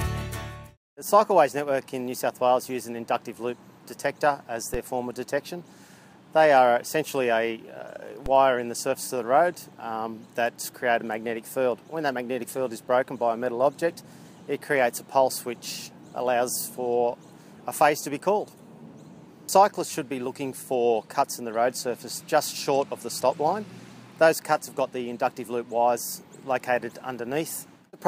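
At 4.74 s and again at 8.26 s there's a DC step: the baseline jumps by about -19 dBFS, thumping once, then drains away through a 20 Hz high-pass.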